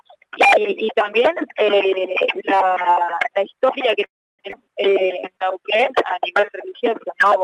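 From 4.05 to 4.41 s the sound halts in a call audio freeze: the last moment is stretched into a fading buzz, then about 300 ms of silence. Delayed packets likely starved the jitter buffer. On a spectrogram a smeared tail gives way to an empty band, and the waveform flattens before resuming intact.

At 4.51 to 4.55 s a skip ahead occurs. Roughly a fifth of a second of audio is dropped and the two sides are spliced almost directly. In the waveform this shows as an abrupt seam, and the spectrogram shows a sudden discontinuity where harmonic tracks jump instead of flowing.

From 4.93 to 7.4 s a jitter buffer slow-down runs playback at 93% speed, adding 170 ms by repeating single pitch periods. Pitch stays unchanged, but sounds drag. On a spectrogram, stretched segments appear, beneath a top edge near 12 kHz that fits the call codec's bandwidth.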